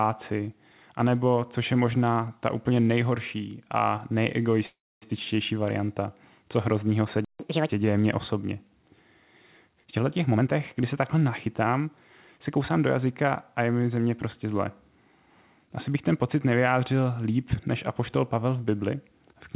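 Speech heard through a narrowband call path, with nothing above 4 kHz, which fits G.711 A-law at 64 kbps. From 4.66 to 5.04 s a call audio freeze inserts about 356 ms: the last sound is stretched into a fading tail and then roughly 260 ms of silence, likely from delayed packets draining the jitter buffer. The speech resumes with "varianta co hroznýho se" and nothing lost, so everything after it is shifted later by the same amount. A playback stall follows "co hroznýho se v" at 7.25 s. The output goes silent for about 150 ms until 7.40 s, likely because the player ran out of data. A catch-up at higher speed then runs from 7.40 to 7.69 s, playing the backlog at 1.5 times normal rate by resampling. Pitch rises by around seven semitones before settling back at "děje mně osobně". Between 10.24 and 11.88 s a jitter buffer speed-up runs the speech at 120 percent with unchanged pitch, making it sound hurried. 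The receiver trims many short pitch-period segments, around 300 ms in total, to reduce an overfilled buffer.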